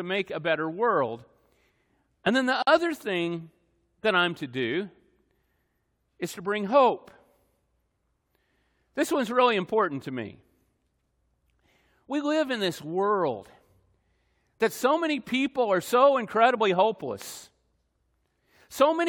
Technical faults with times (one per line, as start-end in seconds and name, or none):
2.62-2.67 gap at a join of encoded pieces
17.22-17.24 loud pop